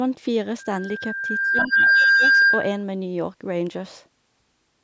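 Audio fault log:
0.59–2.84 s, loudspeaker feedback squeal: a steady 1.6 kHz tone rises out of the speech, swelling over about a second to roughly 10 dB above it. The microphone is re-capturing its own loudspeaker, and at that frequency the loop gain exceeds one, so the tone feeds itself.
1.50–2.25 s, speech suppressed in double talk: for most of this stretch the speech dips, dropping by about 15 dB at worst. The likely cause is an echo canceller that treated the near talker as loudspeaker echo while the far side was playing on the loudspeaker and attenuated both.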